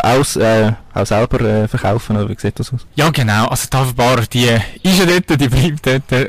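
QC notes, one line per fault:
throughout, hard clipping: the speech is driven roughly 21 dB past what the stage can pass, so about a fifth of all samples sit flattened against the ceiling. Every loud syllable therefore has its peaks sheared off square, and those flat tops spray harmonics high up the spectrum. The result is a harsh fuzz on every loud sound rather than occasional crackle, because the overload is so large.
0.75–0.81 s, 1.79–1.84 s, 3.06 s, 5.09–5.12 s, corrupt frame decoded: short bursts where damaged compressed frames were played as if valid. The misread gains and codes put energy at the wrong frequencies for roughly a frame's length each. The first, between "aus äh" and "auch selber äh", is faint. The second, before "oder wie sieht das", is louder. The last two, the one just before "genau also die" and the one at 5.1 s, hit near full scale and sound like sharp chirps or noise bursts.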